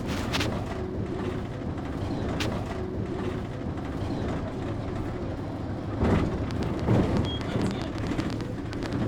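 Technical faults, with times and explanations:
2.39 to 4.39 s, stream segment repeated: about 2.0 s of the sound plays a second time, so the passage leading up to 2.39 s is heard again before the clip carries on, adding roughly two seconds to the running time. A small blip marks the seam where playback jumps back. This is what happens when a streaming player fetches or queues the same chunk of the programme twice and plays both copies in sequence instead of moving on to the next one.
6.51 to 8.94 s, train of clicks: about twenty sharp, similar-shaped ticks ride over the sound at roughly 8.3 per second, with uneven spacing between them. They stand well clear of the material, peaking around 15 dB above it, and are heard in the quieter moments too. The likely cause is a repeated electrical pulse getting into the signal path, such as interference from nearby equipment or a faulty connection or power supply.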